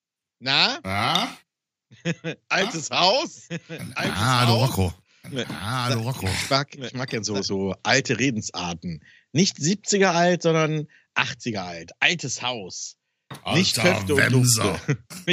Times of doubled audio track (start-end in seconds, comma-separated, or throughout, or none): 2.61-7.45